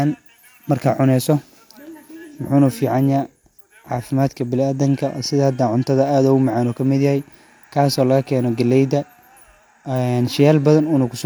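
Speech recording; no audible technical faults detected anywhere in the clip.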